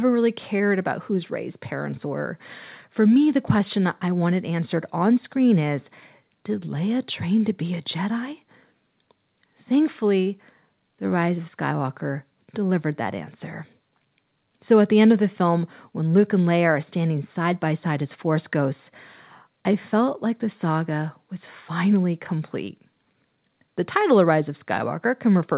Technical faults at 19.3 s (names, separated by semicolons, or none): none